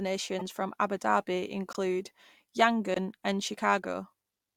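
Speech clip with two kinds of compressed-frame damage. At 0.39 to 0.42 s there's a corrupt frame decoded: a roughly single-frame blip where flipped bits got through the decoder and it rebuilt the frame with bad gains or codes, throwing energy into the wrong frequencies, peaking at about -25 dBFS. Then there are two corrupt frame muted holes, at 1.73 to 1.77 s and 2.94 to 2.98 s. Each is a sudden dropout about 40 ms long, which points to two roughly 20 ms frames the decoder rejected and the player filled with silence, with timing kept intact.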